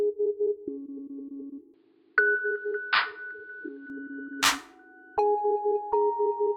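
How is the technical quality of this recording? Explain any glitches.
The music loses its top end and drops a little in level from 1.74 s to 3.90 s, then regains its brightness. Over that stretch nothing above 5.1 kHz gets through, so the sound turns dull and boxy, about 5 dB quieter, with a faint new hiss far beneath it. The change is seamless, with no gap at either switch. The likely cause is an input switched to a poorer device, a narrower-band microphone with its own noise floor and gain.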